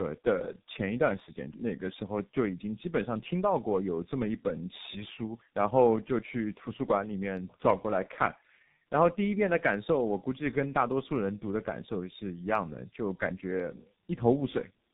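Throughout, the speech passed through tandem speech coding: it was compressed with AMR-NB at 10.2 kbit/s, decoded to G.711 A-law at 64 kbit/s, then compressed again with G.723.1 at 6.3 kbit/s. This put two low-rate speech coders in a row, with the second modelling errors the first had already introduced. Nothing is left above 3.8 kHz, so the speech sounds muffled, and the stacked coding adds a rough, warbly texture.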